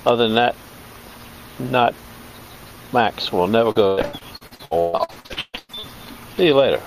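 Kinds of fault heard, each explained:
repeated packet loss (robotic sound): from 3.71 to 5.85 s, short holes recur in quick succession, the longest 141 ms, each patched by extending the last sound. About half that stretch is filled in. Unlike a single dropout, the breaks keep returning, making the sound choppy.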